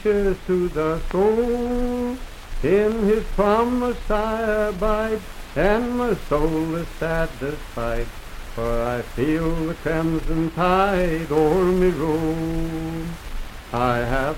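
No technical faults can be heard anywhere in this audio.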